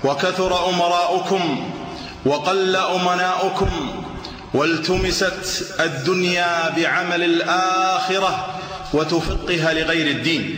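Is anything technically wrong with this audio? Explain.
No, nothing is technically wrong with this audio.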